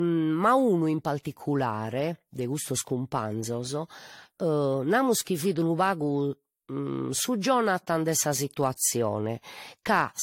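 Throughout, the speech sounds swirly, smeared and hollow, with nothing above 16.6 kHz: generation loss, likely from roughly three AAC re-encodes at 64 kbit/s.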